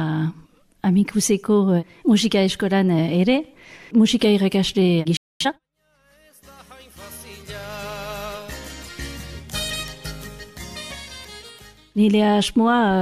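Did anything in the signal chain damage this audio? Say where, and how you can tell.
Yes, at the playback stage. A playback stall silences the sound from 5.17 to 5.41 s, roughly a quarter of a second, in mid-flow. The audio then resumes. The player likely ran out of buffered data, or its output thread was blocked.

Time-compressed catch-up follows at once, from 5.41 to 5.63 s. The audio runs at twice its normal speed but keeps its pitch. The player is cutting small pieces from its backlog and cross-fading the joins to recover time.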